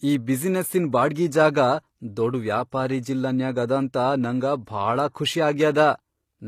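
From start to finish, the speech carries plainly audible HE-AAC compression damage, which fits a low bitrate around 24 kbps: s sounds turn gritty and lispy because the treble is likely rebuilt by spectral band replication from copied lower bands. A spectrogram shows smeared, misaligned upper harmonics and nothing above 14.9 kHz.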